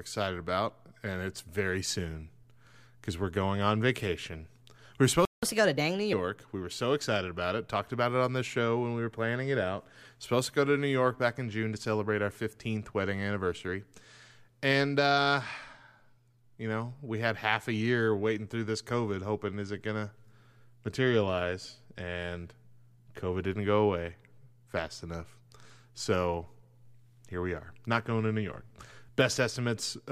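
Playback stall at 5.25 to 5.43 s: the speech cuts out abruptly mid-flow and stays silent for about 176 ms before resuming. The likely cause is the player running short of buffered data, or its output thread being blocked, so nothing reached the output during that gap.

Catch-up at higher speed from 5.43 to 6.13 s: straight after the gap the speech runs at 1.25 times normal speed, raising the pitch by roughly four semitones. The player is resampling its backlog faster to recover the lost time, then drops back to normal speed and pitch.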